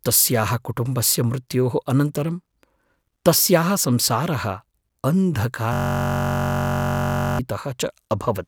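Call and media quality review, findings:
System hang loop, 5.73–7.39 s: speech freezes into a steady buzz at about 46.9 Hz. A 21.33 ms segment repeats exactly, fitting a 1024-sample buffer, unlike choppy jitter dropouts.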